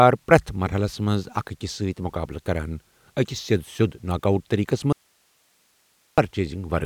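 At 4.93 s the speech cuts off abruptly and does not return until 6.18 s, an audio dropout to a faint residue lasting about 1.25 s. The gap is not silent: it holds steady hiss roughly 45 dB below the speech level, with no fade at either edge. That points to the signal being lost upstream while the path after the break stayed live, most likely a brief interruption in the source connection or feed rather than a mute.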